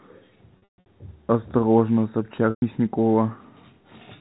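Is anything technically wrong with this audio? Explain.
Yes. Packet loss with pitch repetition hits at 0.58 to 0.86 s (gaps scattered, longest about 140 ms) and 2.50 to 2.62 s (120 ms). The receiver loops the last pitch period to cover the holes, so you get a held, buzzy tone fading toward silence before the speech cross-fades back in.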